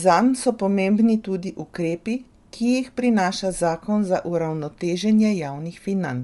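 Speech throughout shows plainly audible Bluetooth LC3 compression damage, likely from that codec: a breathy, grainy edge, nothing above 11.6 kHz, consistent with 48 kbps and 10 ms frames.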